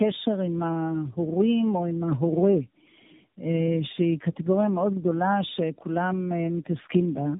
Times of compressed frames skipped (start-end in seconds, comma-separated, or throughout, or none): none